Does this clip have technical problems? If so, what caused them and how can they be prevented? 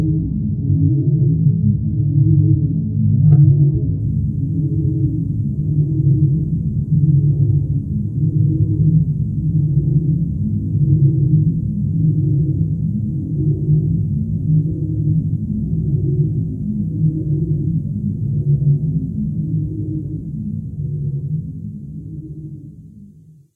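Yes. For the first 4.0 s, from 0.0 s, the sound is dull and smeared, with the top end missing or replaced by a hissy, synthetic shimmer and obvious codec artefacts. At 4.0 s it snaps to a clear, full-bandwidth sound with no gap. This is an adaptive stream starting at a low bitrate: the player opened on a very low-rate AAC version, consistent with around 12 kbit/s, then stepped up to a much richer one, roughly 96 kbit/s, once it had measured the connection. Starting on a higher bitrate rung, or buffering briefly before playback, would prevent it.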